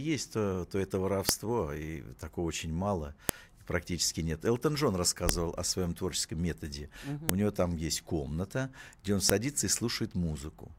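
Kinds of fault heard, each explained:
File header played as audio: the speech arrives in 2-second pieces, and each piece's header bytes get played as if they were sound, giving a sharp, loud click at about 1.29, 3.29, 5.29, 7.29 and 9.3 s, regardless of what the speech is doing.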